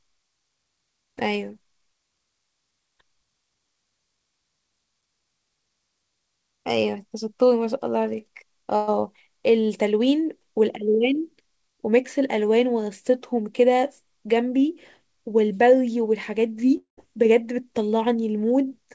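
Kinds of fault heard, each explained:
Burst of packet loss: at 8.76 to 8.89 s a run of packets went missing, so the receiver stretched the last sound for about 114 ms, fading it as a held buzz or hiss. The speech then resumes with roughly 120 ms of material skipped.
Long network dropout: at 16.77 to 16.99 s the last sound is carried on and fades over about 0.2 s, ending in roughly 120 ms of silence, and the speech returns with about 200 ms missing. The likely cause is audio failing to arrive across that stretch.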